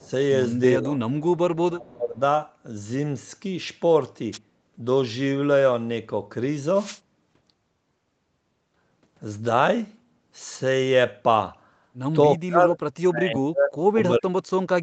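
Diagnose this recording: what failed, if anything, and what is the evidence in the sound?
In the call processing, the echo canceller was likely caught in double talk and turned the near talker down along with the echo. The speech dips at 0.0–0.09 s and 0.8–0.99 s (about 10 dB), at 1.61–2.2 s (about 25 dB), and at 12.37–14.63 s (about 40 dB), so it sinks or drops out in pieces.

At the far end's loudspeaker, the echo canceller likely let some of its microphone pickup through, which produced an echo leak. At 0.0–0.1 s, a faint copy of the sound arrives 316 ms late, roughly 30 dB below the main signal. It is heard as a brief trailing shadow.

Before the call path, the analogue radio link of a wireless microphone faded and let receiver noise rise. This is a wireless microphone noise hit. It is heard as a short swish of static at 4.32–4.38 s and a longer burst at 6.73–7.00 s.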